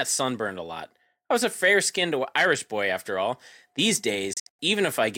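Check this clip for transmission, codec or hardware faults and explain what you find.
One fault is audible, a digital broadcast dropout near the end of the speech, from 4.33 to 4.59 s. The sound ducks out abruptly, with fades of only about 3 ms, in several short holes scattered across roughly a quarter of a second. The longest gap lasts 96 ms, and about 192 ms of audio goes missing in total. The receiver muted whenever incoming frames were corrupt or missing and resumed once valid frames arrived, so the content broadcast during those gaps is gone for good.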